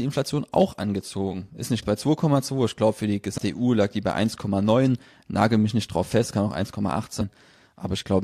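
Compressed frames skipped at 1.81 to 1.83 s, 3.37 s (just after "glaube für die") and 7.2 s: whole frames go missing or are rejected as damaged. The speech jumps ahead by roughly 200, 150 and 100 ms, consistent with 23.2 ms frames. Each join is a short smeared blip.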